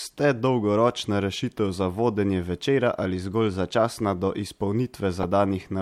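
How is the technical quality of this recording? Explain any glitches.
There's one glitch in this speech, right near the end at 5.23 s, and it's a corrupt frame decoded. A handful of compressed frames arrived with flipped bits, and the decoder played them anyway. The misread gains and codes put energy in the wrong frequencies, giving a short chirpy blip, peaking somewhere around -15 dBFS.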